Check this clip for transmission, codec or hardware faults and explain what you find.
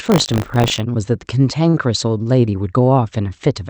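Two faults show up here, both in the first half of the speech clip, and they sit on top of a call path whose top end stops around 8 kHz.

From 0.0 to 0.8 s there's buffer tearing. The writer and the hardware reader have slipped on a ring buffer, so a small slice of each period, roughly a twentieth, replays audio about 40 ms stale. Those hard joins give a rattly 50 Hz buzz under the speech.

At about 1.69 to 1.76 s there's a short stall from a late packet. The jitter buffer ran dry, so the receiver held the last sound for 42 ms until the packet turned up, then carried on. Nothing is lost, but that sound drags with a faint buzz or dip, and the delay grows by 42 ms.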